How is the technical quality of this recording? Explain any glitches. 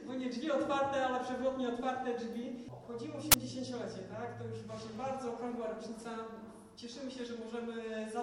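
The recording has one clear glitch, an uninitialised buffer, from 3.32 to 3.34 s. For about 21 ms, which fits a 1024-sample buffer, the system played a block before any audio was written to it. Leftover memory was read as samples, producing a brief, loud burst of digital noise. On a waveform it appears as a sudden block, and on a spectrogram as a broadband vertical stripe.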